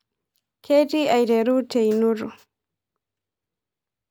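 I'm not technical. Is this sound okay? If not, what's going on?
Yes, this speech recording sounds fine, with no technical problems to point out. There is nothing here that needs fixing.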